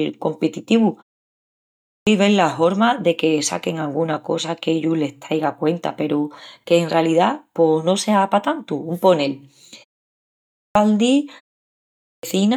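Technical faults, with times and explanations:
1.45–2.07 s, 10.14–10.75 s and 11.63–12.23 s: clipped start after a pause. The output device drops into a low-power state during the short silences before each of these points (about 0.51 s, 0.38 s and 0.31 s) and needs time to wake and lock again, so roughly 0.6 s of the returning speech (617 ms, 614 ms and 603 ms) never reaches the listener. Each phrase therefore bursts out of silence already underway, missing its opening sounds.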